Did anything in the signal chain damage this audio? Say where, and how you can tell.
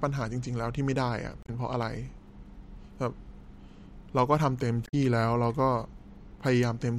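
Yes. The damage happened at the codec stage: there is damaged data in the compressed stream at two points in this speech, from 1.43 to 1.50 s and from 4.85 to 4.94 s. Each is a brief chirp, squawk, click or short hole lasting under a tenth of a second. Corrupted bytes make the decoder misread those frames and lose sync until it finds a valid header again. A spectrogram shows a short, sharp-edged disruption, and the waveform shows an abrupt break at each spot.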